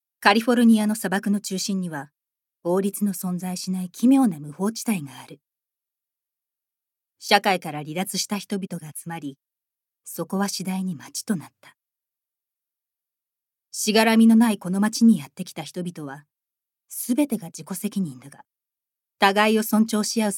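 No faults can be heard anywhere in the clip. Nothing in the audio points to a dropout, distortion or timing problem at any point.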